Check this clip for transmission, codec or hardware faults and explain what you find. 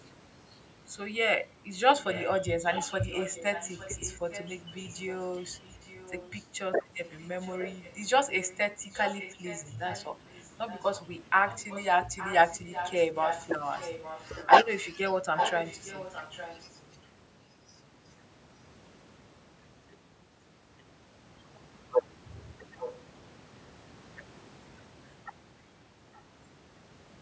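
One transmission fault is present: an echo leak, heard in four separate stretches.

Echo leak, 2.12–6.48 s, 7.04–14.75 s, 15.36–17.08 s and 22.79–22.95 s: a delayed copy of the speech trails it by about 0.86 s at roughly 10 dB lower, likely from a loudspeaker whose echo canceller let some of the sound back through.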